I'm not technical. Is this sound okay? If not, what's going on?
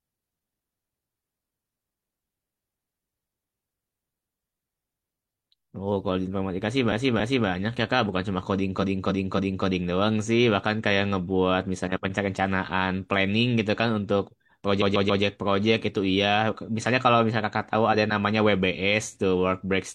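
No. There are repeated frames at 6.88 to 7.43 s, 8.78 to 9.62 s and 14.77 to 15.19 s. The speech comes in small packaged chunks, and a few of them got played more than once. A piece about 0.28 s long plays two extra times at the first spot and three extra times at the second, and a 0.14 s piece plays three extra times at the third. Each is heard as a stutter, and together they make the clip nearly 2 s longer.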